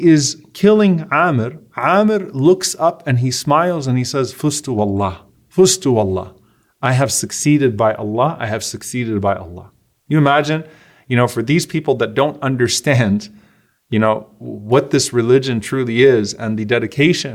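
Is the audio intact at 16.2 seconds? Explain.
Yes, the speech at 16.2 seconds is intact, with no dropout, click, distortion or other fault at that moment.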